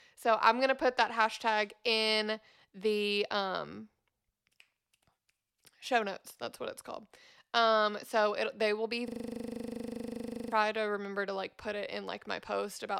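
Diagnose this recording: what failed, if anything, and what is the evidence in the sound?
Right after "it they will be", from 9.08 s to 10.52 s, the speech stops and is replaced by a rapid loop that repeats at 25 Hz before the speech resumes at "to remember to like". This is a system hang loop at the driver and buffer stage. While the system froze, the audio hardware kept replaying one 40 ms stretch of its ring buffer, 36 times in a row, and about a second and a half of the speech was lost.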